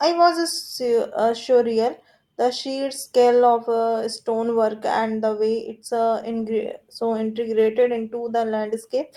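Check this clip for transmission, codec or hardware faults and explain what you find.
There's one fault here: a call bitrate drop starting at 6.2 s and running to the end of the clip, about 3 s in all. The call's bandwidth estimate fell, so the encoder had to squeeze the speech into far fewer bits, which fits a drop from around 64 kbps to 28 kbps. It codes the speech more coarsely, so the last stretch sounds rougher. It doesn't recover before the clip ends.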